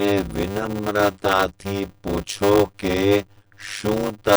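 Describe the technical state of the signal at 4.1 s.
At 4.1 s two faults run together, and both last the whole clip. First, a block size mismatch (padded): one stage delivers shorter blocks than the next one consumes, and the gap at the end of each block is filled with silence. The sound points to 256-sample blocks being read as 480-sample blocks. The result is a steady 100 Hz buzz at the block rate, and the speech plays at 0.533 times normal speed while keeping roughly its usual pitch.

Second, the damage is plainly audible. This pattern fits likely MP3 compression at a low bitrate around 48 kbps. Short of bits, the encoder drops quieter frequency components, which flicker in and out from frame to frame. That gives the speech a watery, swirling texture, turns sibilants metallic and chirpy, and blurs consonant attacks.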